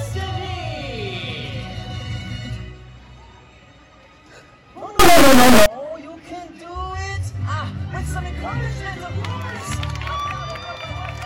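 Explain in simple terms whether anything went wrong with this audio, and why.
From 4.99 to 5.66 seconds the sound turns into a harsh, extremely loud buzz. This is an integer read as float fault. The stored numbers, likely 32-bit whole numbers, were read as decimal numbers instead.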